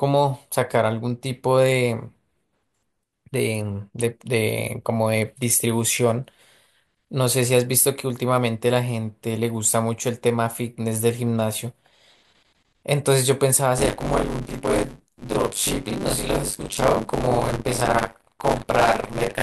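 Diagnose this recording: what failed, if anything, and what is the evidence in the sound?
The driver or buffer stage failed: from 13.77 s to the end of the recording, the application writing the output ring buffer and the hardware reading it drifted out of step. Each period now mixes fresh speech with a chunk, somewhat under half of it, left over from a few tens of milliseconds earlier, with abrupt joins at both edges. This buffer tearing produces a steady robotic rattle at 100 Hz, which fits a 10 ms period, and is present only while speech plays.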